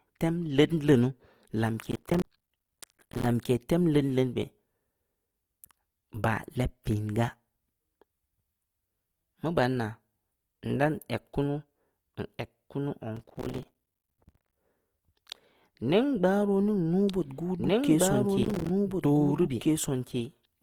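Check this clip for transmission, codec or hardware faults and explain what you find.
Three kinds of fault are present: codec damage throughout, three bursts of processor overload crackle, and a doubled audio track over the final few seconds.

The whole clip carries plainly audible Opus compression, likely from encoding in its CELT music mode at around 24 kbps. Bandwidth stays full, with content reaching about 20.2 kHz, but the thin bit budget leaves the speech rough and grainy. On a spectrogram the upper bands look smeared and noise-filled rather than sharply detailed.

Processor overload crackle is heard from 1.85 to 3.26 s, ending just before "tem leudn leunu beh", from 13.17 to 14.56 s, and from 18.43 to 18.69 s. The processor repeatedly misses deadlines on buffers of about 5 ms. Each miss drops a short silent gap, and the gaps pile into gritty tearing. The waveform shows dense hard-edged dropouts, and the spectrogram shows thin vertical streaks.

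From 17.08 s to the end, a doubled audio track is audible. The likely cause is a second copy of the sound mixed in about two seconds late and at roughly the same level. It enters abruptly, with no decay or room colour. On a spectrogram, the same patterns repeat after a fixed two-second offset.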